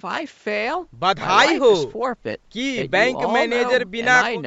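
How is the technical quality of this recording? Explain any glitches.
No glitches or technical faults can be heard in the recording. It has passed through a call's microphone processing, so the lowest bass is trimmed away and nothing reaches above 8 kHz, which is normal for that path.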